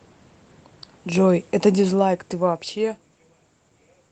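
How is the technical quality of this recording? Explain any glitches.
There's one real glitch: automatic gain falling, from 1.09 to 3.12 s. The gain control decided the input was too loud or its background noise too strong and pulled its gain down by about 11 dB over those two seconds, so the speech and the room noise sink together.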